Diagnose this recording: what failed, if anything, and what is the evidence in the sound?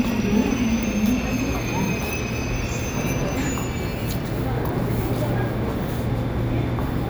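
The failure is at the storage and playback stage: CD scratch ticks. Between 2.46 and 3.29 s there are four short ticks, each around a millisecond at most, evenly spaced at roughly 3.6 per second, which matches the disc's rotation rate. A scratch corrupts more data than error correction can rebuild once per revolution, and the player briefly interpolates or mutes those samples. The spacing tied to disc rotation distinguishes this from random vinyl crackle.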